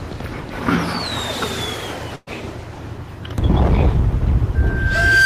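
A burst of packet loss hits at 2.15 s and lasts until 2.29 s. About 120 ms of audio never arrives. The receiver covers most of that gap, roughly 113 ms, by stretching the last sound it had and fading it down, which turns it into a held, decaying smear. About 20 ms of near-silence follows before the audio picks up further along, with the missing stretch gone. Loudspeaker feedback squeal then starts at 4.55 s and runs to the end of the clip. A microphone is hearing the loudspeaker it drives, and at 1.6 kHz the loop gain goes above unity, so that tone feeds on itself. It swells over roughly 0.7 seconds into a whistle that ends up a few decibels louder than the audio beneath it.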